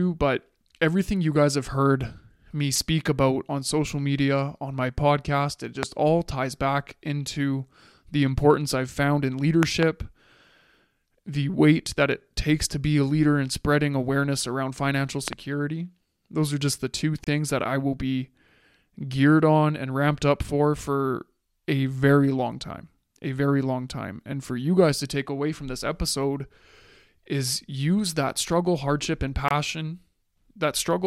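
At 5.83 s a single loud pop stands about 20 dB above the speech. A double pop follows between 9.63 and 9.85 s, and another, about 15 dB up, comes at 15.28 to 15.35 s, just after "spreading awareness around financial". The likely cause is a sudden voltage step or pulse entering the signal. Unlike a dropout, the speech carries on underneath each thump.

At 17.24 s a gap at a join of encoded pieces opens for about 28 ms, between "are just the two" and "that I will be". A second one, about 24 ms, falls at 29.48 s after "that struggle hardship and". Separately encoded segments were spliced with their encoder delay and end padding left in. This inserts abrupt, slightly smeared silence. Speech resumes exactly where it stopped, so nothing is lost, as it would be in a dropout.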